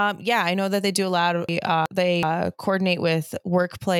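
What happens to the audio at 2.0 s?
A chunk of audio reached the output one slot late, so from 1.49 s to 2.23 s the speech plays as chunks out of order. Each chunk is about 372 ms long, which means the two neighbouring chunks covering that span are swapped. Nothing is missing, but the sequence is wrong, and there are three hard joins at the boundaries. At 2.0 s the speech sounds jumbled, with sounds arriving before the ones that should precede them.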